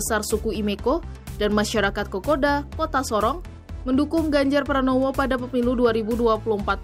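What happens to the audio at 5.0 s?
Nothing goes wrong at 5.0 s; the audio runs through that moment intact, with no dropout, click or distortion to be heard.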